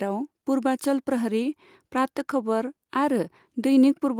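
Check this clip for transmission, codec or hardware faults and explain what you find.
Nothing in the speech signal points to a transmission, codec or hardware fault: the level, continuity and timing hold steady throughout, with no audible break or disturbance anywhere.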